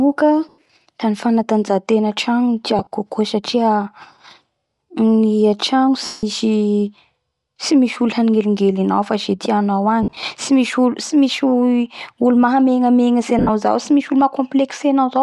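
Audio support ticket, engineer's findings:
Breathy, grainy edge on the speech the whole way through, with a noisy, hissy top end. Likely Bluetooth LC3 compression, with the upper spectrum zeroed and noise-filled, consistent with roughly 48 kbps.

Lost LE Audio frames at 0.49, 2.79, 6.05, 10.03 and 13.39 s, 40 to 180 ms each, some in scattered bursts. The decoder repeats the last spectrum, so there's a noisy smear that fades out.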